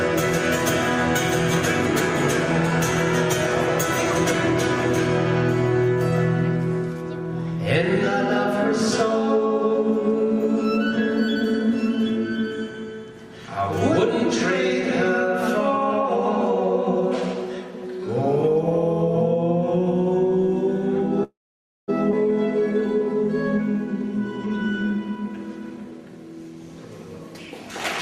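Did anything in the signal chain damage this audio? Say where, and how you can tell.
Yes, the network and jitter-buffer stage damaged it. A call audio freeze runs from 21.23 to 21.90 s. The sound trails on briefly, then falls silent for about 0.55 s before resuming where it stopped. This is likely held-up packets starving the buffer, which adds 645 ms of delay.

A skip ahead follows at 22.12 to 22.14 s. Playback lurches forward with almost no gap. Roughly 0.4 s of audio is gone, and the two sides are butted together. The buffer or network dropped that stretch while later audio was already queued, which cancels much of the earlier delay.

A jitter buffer speed-up runs from 23.57 to 26.13 s. The sound plays about 7% fast, yet pitch stays unchanged, so it sounds hurried. The receiver repeatedly cut short pitch-period slices, about a fifth of a second in total, to drain excess buffered audio.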